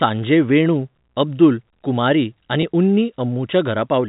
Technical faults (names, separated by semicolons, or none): packet loss with pitch repetition